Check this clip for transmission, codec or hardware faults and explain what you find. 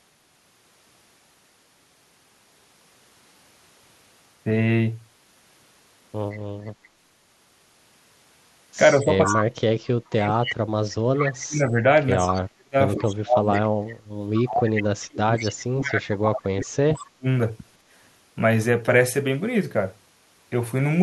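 Two kinds of fault appear in this speech: a leaking echo and a suppressed talker during double talk, both concentrated in the middle of the clip.

Echo leak occurs at 6.31–6.88 s, 9.25–9.41 s, 10.34–11.21 s and 12.32–15.51 s. The likely cause is a far end on loudspeaker whose echo canceller lets part of its microphone pickup back into the call. Each time, a copy of the speech returns 163 ms late. It is faint at first (about 25 dB below the speech), much stronger at 9.25 s (about 5 dB below), and about 10 to 15 dB below in the later stretches.

Speech suppressed in double talk affects 8.98–13.49 s and 14.49–17.26 s, roughly three seconds of each span. While both sides talk, an echo canceller that can't tell the local talker from the returning echo likely attenuates everything it hears. The speech dips and breaks into pieces, dropping at its deepest by around 35 dB. It overlaps the stronger echo bursts, so the two faults are heard tangled together.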